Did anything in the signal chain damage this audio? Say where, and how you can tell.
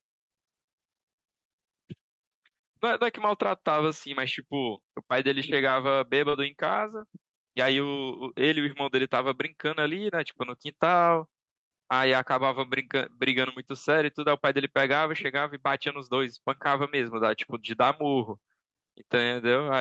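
Yes. Short concealed packet loss at about 6.29 to 6.35 s, a network-stage fault. Roughly 40 ms of the speech never reached the decoder in time, and the receiver covered 34 ms of that hole by extending the sound just before it, following its pitch where it was voiced and using shaped noise where it wasn't. It then blended back into the real signal. You hear this as a brief smear or wobble rather than a clean gap.

The tail of that same dropout, from about 6.33 to 6.35 s, is a lost packet rebuilt from error correction. The next packet carried a low-bitrate copy of the missing 20 ms, which fits Opus in-band forward error correction, and the decoder played that copy instead of leaving silence. Those frames sound rougher and noisier than the audio around them, which is why the end of the smear has a grainier texture before the normal Opus stream resumes.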